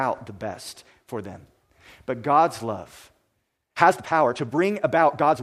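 From 3.55 s to the end, the speech jumps to about 1.59 times its earlier pace while the pitch holds steady. This is a time-stretched section. Software likely squeezed the audio to fit a shorter length by dropping short pieces. It sounds rushed.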